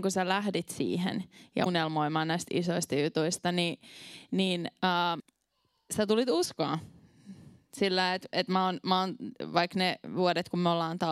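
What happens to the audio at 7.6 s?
At 7.6 s the speech carries straight through, with no dropout, click, distortion or other disturbance.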